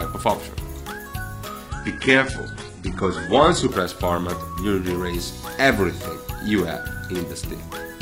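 From 1.69 to 3.69 s the treble abruptly cuts off above 11.1 kHz, with no gap: an adaptive stream switching to a lower bitrate.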